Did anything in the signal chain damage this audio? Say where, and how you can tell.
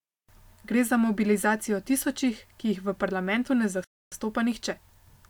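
Yes. The speech drops to complete silence from 3.84 s to 4.12 s, a gap of about 0.28 s, and then carries on. The cut is clean, with no fade, which points to the wireless link to the playback device and not to the source. This is likely a Bluetooth stall: interference held back packets, the headphones' buffer emptied, and output stopped until retransmitted audio arrived to refill it.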